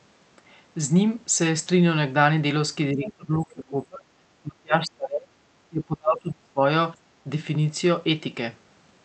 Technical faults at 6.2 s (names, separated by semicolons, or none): speech suppressed in double talk